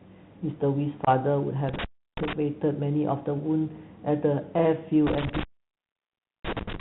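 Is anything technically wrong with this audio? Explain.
Yes. The speech carries three kinds of technical fault.

The Bluetooth CVSD headset codec colours the whole clip. The narrowband codec encodes each sample as a single up-or-down bit with an adaptive step, which fits a 64 kbps CVSD link. Nothing above 4 kHz survives, so the speech sounds boxed-in and telephone-like. The codec damage is plainly audible: s sounds turn scratchy, loud bright passages distort as they outrun the step size, and a granular hiss sits beneath everything.

Unconcealed Bluetooth headset packet loss strikes from 1.05 to 1.08 s. Several consecutive voice packets between headset and phone went missing, and about 22.5 ms of audio was replaced by silence or an idle pattern instead of being patched over. The result is a short, hard-edged hole in the speech that can click at its boundaries. Because the link is CVSD, the speech resumes a little quieter for a moment as the codec's step size rebuilds.

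Intermittent contact occurs twice, at 1.69 to 2.33 s and from 5.07 s to the end at 6.80 s. A loose cable or plug briefly opens the signal path. The sound drops out for about 328 ms in the first event and about 1.0 s in the second, with crackle where the connection breaks and remakes. While the line is open, faint hiss remains.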